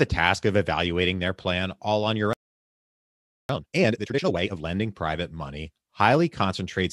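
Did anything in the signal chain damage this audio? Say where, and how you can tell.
Yes. A playback stall runs from 2.33 to 3.49 s, right after "plan all on your". The speech cuts off in mid-flow and the output goes silent for about 1.16 s. This is a playback-stage fault, likely caused by the player's buffer running dry or its audio thread being blocked.

Time-compressed catch-up follows from 3.49 to 4.65 s and ends by "private money". The player shortens the backlog left by the stall by cutting small pieces out and cross-fading the remainder. That runs the speech at twice its normal speed with the pitch unchanged, so it sounds hurried. This is also a playback stage, where the player recovers lost time instead of resampling.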